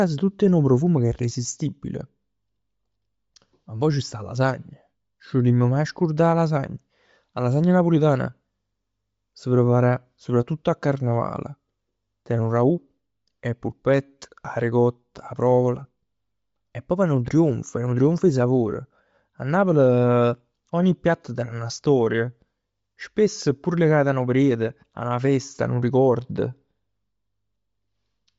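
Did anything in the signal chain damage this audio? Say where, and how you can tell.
Yes. The damage sits at the codec stage and runs throughout. Nothing reaches above 7.7 kHz, and the top of the speech has a plainly breathy, grainy edge. That is likely Bluetooth LC3 compression at a low rate, around 32 kbps, refilling zeroed high bands with noise.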